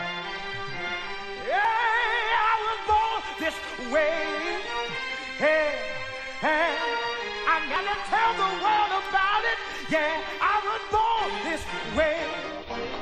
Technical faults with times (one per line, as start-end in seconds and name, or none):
1.65 damaged data in a compressed stream
7.76-7.79 damaged data in a compressed stream